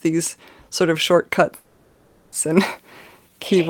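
At 1.55 s, just after "sort of", the speech stalls in a call audio freeze that lasts until 2.34 s. The receiver stretches the last sound into a fading buzzy hiss for about 770 ms, followed by roughly 40 ms of silence. Speech then resumes exactly where it stopped, with nothing lost but about 770 ms of added delay. The likely cause is packets held up in transit, leaving the jitter buffer empty.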